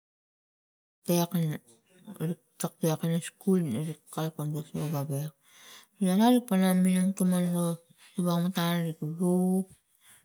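No faults found in the speech; the editorial fade-in just after one second rises evenly, with no click or hard edge.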